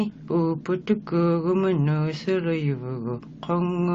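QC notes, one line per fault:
No faults detected in this audio on review.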